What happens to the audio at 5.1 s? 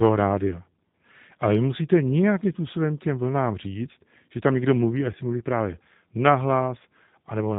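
At 5.12 to 5.16 s, VoIP packet loss concealed by the speech codec: the decoder extrapolates a brief buzzy tone or coloured noise, consistent with one lost 10 ms frame, then recovers weak or distorted rather than dropping to silence. Throughout, the G.729 codec at 8 kbit/s adds a rough, synthetic quality, with nothing above 4 kHz.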